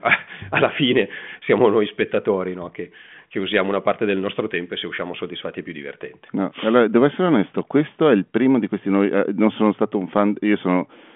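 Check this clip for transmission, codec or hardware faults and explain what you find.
No faults found: the speech comes over a 40 kbit/s G.726 ADPCM telephone path whose band runs from about 150 Hz to 3.4 kHz with nothing above 3.7 kHz, and the coding leaves at most a faint trace.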